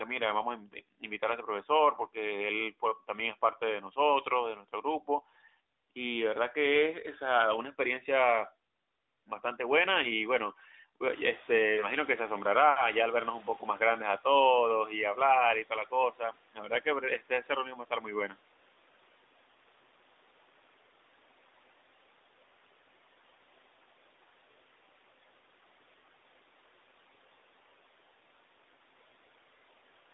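Speech cut by the noise suppressor occurs at 4.55 to 5.08 s, 16.12 to 16.36 s, 16.54 to 18.06 s and 18.3 to 18.4 s. The suppressor mistook quiet parts of the speech for background noise, pulling them down by up to about 12 dB. This affected roughly a fifth of a second in the first event and around half a second across the longest one. Soft consonants and word endings sound swallowed, and the later cuts follow the room noise rising at about 11 s.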